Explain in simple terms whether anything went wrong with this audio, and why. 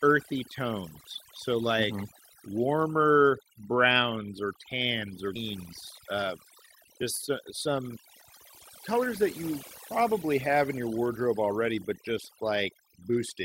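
Overdone noise removal runs through the whole speech clip: the background drops and breaks up into twinkling specks, unlike plain hiss.

A skip ahead happens at 5.35 s. Close to half a second of speech vanishes and the two sides join with no silence, unlike a dropout, which leaves a gap.

Jitter buffer speed-up appears from 7.02 to 7.89 s, at 104% speed, and from 8.94 to 9.52 s, at 108%. Tiny slices were trimmed to catch up, so the speech runs faster, and the second stretch sounds hurried, but it keeps its normal pitch.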